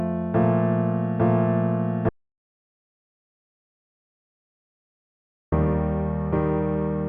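At 2.09 s the sound cuts off abruptly and stays gone until 5.52 s, an audio dropout to silence lasting about 3.43 s. The gap is dead silence with no room tone, so whatever happened there is lost. The likely cause is an input that disconnected or muted while the recorder kept writing silence. On a waveform this is a flat line; on a spectrogram, a blank black band across all frequencies with hard vertical edges.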